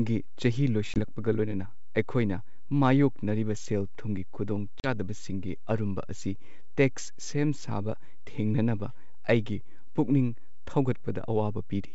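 A DC offset runs through the whole recording. The waveform sits shifted off zero by a constant amount. You cannot hear it directly. It eats into headroom and shows as steady energy at the very bottom of the spectrum.

Packet loss on an ADPCM call strikes at 0.94 to 1.00 s and again at 4.80 to 4.87 s. About 20 ms and then 40 ms of speech drop to hard-edged silence, roughly one and two packets' worth. The decoder's predictor and step size lose track. Speech returns with brief distortion before settling.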